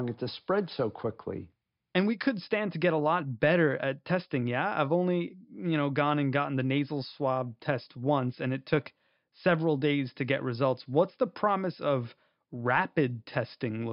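A speech recording with nothing technically wrong to point to. No fault turns up anywhere in it, so there are no times or causes to report.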